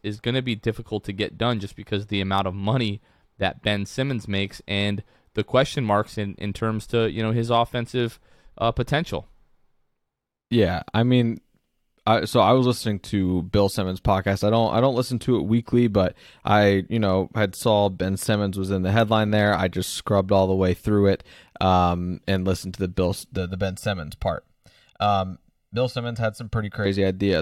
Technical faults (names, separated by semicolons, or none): channel delay (comb filtering)